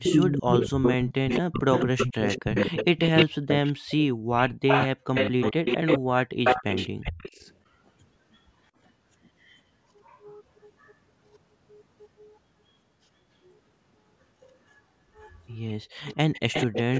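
Speech from a call where, from 0 to 7.42 s, the talker is likely caught in speech suppressed in double talk. For roughly 5 s the level falls by up to about 40 dB in pieces, showing as gouged-out holes in the waveform and blanked bands on the spectrogram while the far side talks. An echo leak, likely from a loudspeaker echo canceller leaving residue, returns a copy 212 ms late at 0.04–4.05 s and 4.67–7.54 s, nearly as loud as the speech. Fainter scraps about 35 dB down follow at 9.44–10.16 s, 10.79–10.91 s and 13.44–13.51 s, and a stronger one about 10 dB down runs from 15.23 to 16.99 s. On a spectrogram these appear as smeared, doubled harmonic traces below the 8 kHz ceiling. From 15.83 to 15.98 s the background is gated by the echo canceller. The room floor drops about 37 dB for 150 ms, a brief dark gap in the noise floor.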